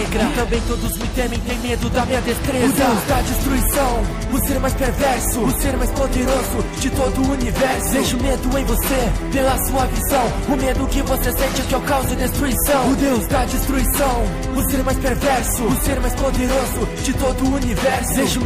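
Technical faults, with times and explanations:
Throughout, MP3 compression: the coding damage is plainly audible across the whole clip, and the likely cause is a low-bitrate MP3 encode, which fits about 64 kbps. With too few bits, the encoder drops weak frequency lines that come and go between frames, giving a watery, swirling texture.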